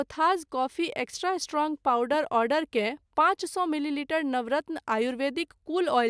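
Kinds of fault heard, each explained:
No faults turn up anywhere in this recording; it just runs along without a hitch.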